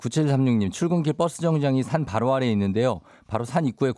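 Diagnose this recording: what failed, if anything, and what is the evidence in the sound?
Nothing in the signal chain appears to have failed: the speech signal is continuous and intact, with no dropouts, distortion, level jumps or other audible defects at any point.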